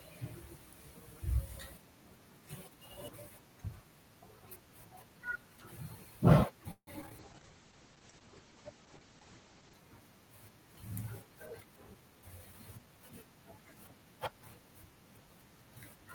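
This speech clip has three network-related faults in quick succession. From 6.71 to 7.12 s there is repeated packet loss with a robotic sound: four gaps arrive close together, the longest about 157 ms. The receiver fills 189 ms by extending the preceding sound, and 60 ms is simply absent. Nearly half of that stretch is synthetic fill, so the speech turns choppy and robotic, with fragments dropping out. Immediately after, from 7.2 to 9.81 s, a call bitrate drop sets in. The sound goes rough and watery, and the top end collapses from a full 20 kHz band to about 8 kHz, leaving the speech muffled. That combination is consistent with the encoder being pushed from roughly 32 kbps down to around 10 kbps after the bandwidth estimate fell. It holds at that low setting for about 2.5 s before the fuller sound returns. From 11.6 to 13.01 s a jitter buffer speed-up occurs. The receiver, holding more delay than it targets, repeatedly trims short pitch-period-sized slices to catch up. 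Pitch stays unchanged, but the speech runs at about 111% of normal pace, sounding hurried, with around 150 ms removed overall.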